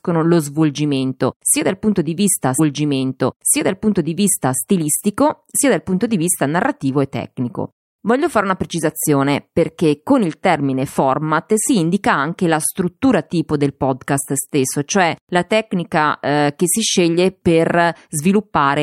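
At 2.58 s, right after "dal punto di vista", the speech jumps back and replays about 2 s of itself, running until 4.58 s. That's a stream segment repeated: the player fetched or queued the same chunk of the stream twice and played it back to back. You hear a small blip at the seam where it jumps back, then a stretch you've already heard, which adds roughly two seconds to the running time.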